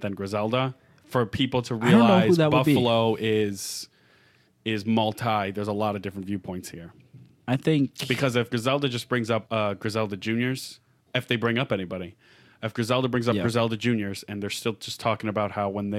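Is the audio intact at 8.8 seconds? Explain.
Yes, the audio is intact at 8.8 seconds, with no fault audible at that moment.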